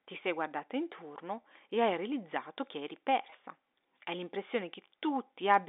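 Twice a single packet of speech went missing, at 1.42 to 1.44 s, between "ti sei guardata intorno" and "e hai realizzato che", and at 3.30 to 3.32 s, right after "hai realizzato che eri". Each gap is about 20 ms, which fits one lost 20 ms packet. Packet loss with pitch repetition bridges each gap by repeating the last pitch period, so the sound briefly holds with a slight buzz. The G.711 telephone coding limits the band to roughly 250 Hz to 3.7 kHz.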